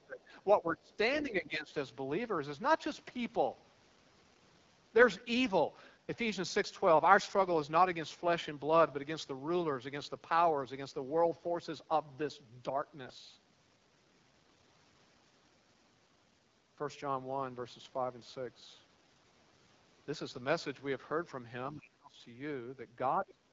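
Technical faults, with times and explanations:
Throughout, AMR wideband (HD Voice) codec: the speech sounds rough and raspy, with nothing above about 7.6 kHz. The codec models the voice as pulses driving a vocal tract filter up to 6.4 kHz and fills the top band with shaped noise. At a low rate the pulse coding is too coarse to track the voice cleanly, and the damage heard here fits the 8.85 kbit/s mode.
0–0.31 s, 0.61–0.92 s, 1.23–1.72 s, 21.73–22.18 s and 23.19–23.52 s, speech suppressed in double talk: the speech ducks in short stretches of about a third to half a second. The drops range from about 10 dB in the mildest case to about 25 dB in the deepest. The likely cause is an echo canceller that mistook the talker for loudspeaker echo while the far end spoke and turned the outgoing sound down.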